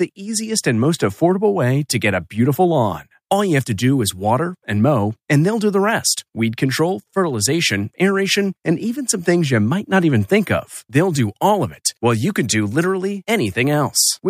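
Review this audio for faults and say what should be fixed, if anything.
A bit error spike occurred twice: a flipped bit in memory or on a digital link threw the sample value off by a power of two for what sounds like about two samples before it snapped back. Each gives one sharp, broadband tick unrelated to the speech, at 9.12 s right after "fertilization aeration and even", peaking at about -18 dBFS, and at 12.81 s just after "while you can do", at about -24 dBFS. To prevent this, carry the audio over error-checked links and storage (checksums or ECC memory) so corrupted samples are caught and corrected before playback.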